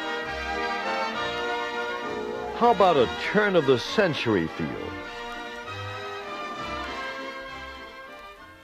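No technical faults can be heard anywhere in the recording, and the signal stays continuous and steady throughout.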